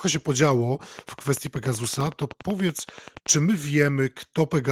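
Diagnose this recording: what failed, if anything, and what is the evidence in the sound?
A train of clicks runs from 0.99 to 3.27 s, about 30 in all at a regular 10.6 per second, peaking a few dB above the speech. The likely source is interference from nearby equipment or a faulty connection or power supply. On a spectrogram they appear as evenly spaced full-height vertical lines, and the waveform shows matching, similarly shaped spikes.

Processor overload crackle sits at 1.96 to 2.17 s, a driver or buffer fault. Roughly five short buffers, each only a few milliseconds, missed their deadline and were filled with silence. The waveform shows hard-edged dropouts, and the spectrogram shows a gritty cluster of broadband vertical streaks.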